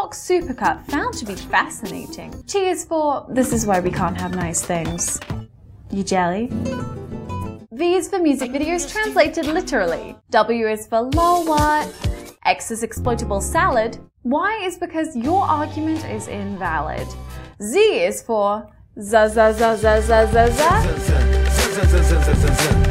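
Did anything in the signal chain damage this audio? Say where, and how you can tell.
No, none of the stages between capture and playback left any audible damage on this signal.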